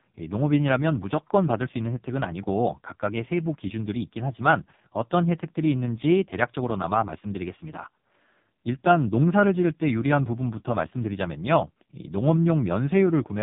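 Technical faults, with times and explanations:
Throughout, AMR narrowband mobile codec: nothing gets through above about 3.7 kHz, so the speech sounds boxed-in and phone-like, and the damage is heavy, with a buzzy, synthetic edge on every voiced stretch. That buzz comes from the codec rebuilding the voice from a vocal-tract model fed by only a few pulses per short subframe, and this degree of roughness fits the lowest AMR-NB mode at 4.75 kbps.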